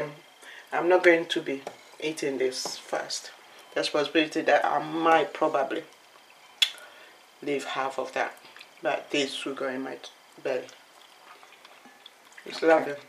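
No technical faults can be heard anywhere here.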